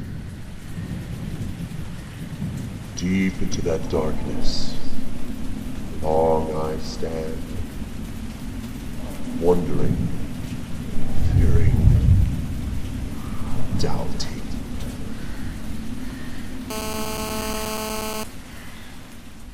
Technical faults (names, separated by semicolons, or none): GSM phone buzz